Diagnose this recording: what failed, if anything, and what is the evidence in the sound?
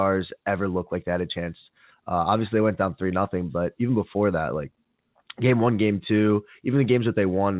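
Nothing failed; call audio ending at 4 kHz is expected.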